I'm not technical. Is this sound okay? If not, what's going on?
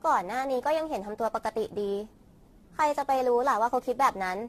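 No, not quite. All the way through, the speech has a swirly, hollow, watery quality, and the starts of sounds come out soft and smeared instead of crisp. There's also nothing above about 14 kHz, so the sparkle at the very top is gone. That pattern is what's called generation loss. It likely comes from the recording being compressed and re-saved roughly ten times, with each pass adding a bit more damage.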